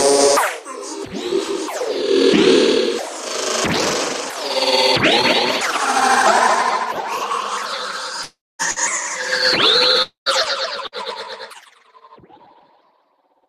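A recording of sounds. Two long stretches of audio likely never arrived, a long network dropout at 8.23 to 8.62 s and again at 10.02 to 10.29 s. In each, the last sound is carried on as a fading buzz or hiss before it falls away to near silence, and then the sound resumes with about 360 ms and 240 ms missing. A burst of packet loss hits briefly at 8.71 s and again at 10.87 s. Each time, about 60 ms of audio is gone, bridged by a short fading continuation before playback resumes past the gap.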